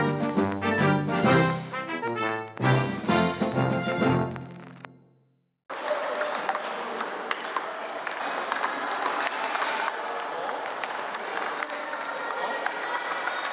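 Nothing is technically wrong with this audio, which has come through a call path with the top of the band ending at 4 kHz, consistent with a G.711 mu-law link.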